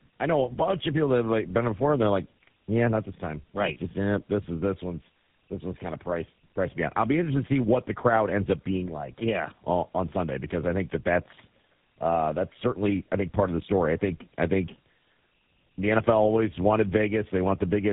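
Tandem speech coding runs throughout: the speech passed through G.729A at 8 kbit/s, G.711 mu-law, then GSM full rate, so the second speech coder re-coded the first's errors. Nothing sits above 3.8 kHz, and the stacked roughness and warble exceed any single codec's.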